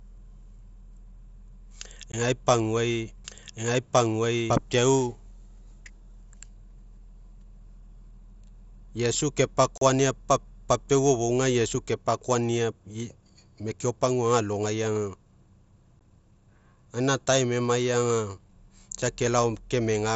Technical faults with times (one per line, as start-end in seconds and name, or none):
2.12 unconcealed Bluetooth headset packet loss
3.25-4.57 doubled audio track
9.78-9.82 unconcealed Bluetooth headset packet loss
15.99 unconcealed Bluetooth headset packet loss